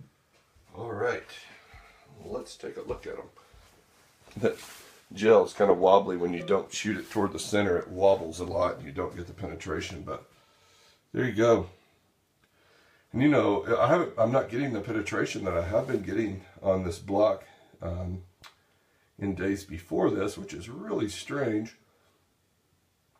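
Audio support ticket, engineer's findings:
No audible faults found on listening; nothing to report.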